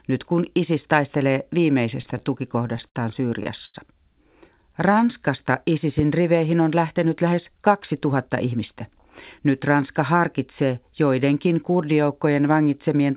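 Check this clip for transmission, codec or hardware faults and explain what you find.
Five kinds of fault are audible in this speech recording: a stutter, two short stalls, a slow-down, a pop and a speed-up. The audio comes through a narrowband call path with nothing above 4 kHz, which fits G.711 mu-law at 64 kbps.

From 2.02 to 2.97 s there are repeated stalls (stutter). Packets reached the receiver late, so its jitter buffer emptied nine times. Each time, the receiver extended the last sound until new audio arrived. Together the fills add 134 ms, about 14% of that stretch. The longest is 58 ms. Nothing is lost. The speech drags and catches in a choppy, halting rhythm.

Two short stalls from late packets follow, at 3.43 s and at 3.65 to 3.76 s. In each case one packet missed its slot, and the buffer ran dry. The receiver held the last sound and then resumed where it left off. The first fill is only 19 ms. 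The second is 88 ms, long enough to hear a sound held unnaturally, with a slight buzz or dip.

A jitter buffer slow-down runs from 4.54 to 5.21 s. The buffer needed more reserve. So the receiver repeated single pitch periods and small slices of pause, again and again, adding 85 ms. Playback drops to 88% of normal speed, but the pitch stays the same. Sounds come out drawn-out and slightly sluggish.

At 5.99 to 6.02 s there is a single loud pop. It peaks about 10 dB above the surrounding speech. It is a sharp, brief click laid on top of the audio, and the speech continues underneath without a break. The likely cause is a sudden voltage step or spike, from a plug, a switch, static or a driver glitch, shaped into a pulse by the circuits after it.

From 7.26 to 8.73 s comes a jitter buffer speed-up. Too much audio had built up in the buffer. To cut the delay, the receiver trimmed short pieces one or a few pitch periods long, many times over. 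In all, roughly a tenth of a second goes. The speech runs at about 108% speed with unchanged pitch, so it sounds slightly hurried.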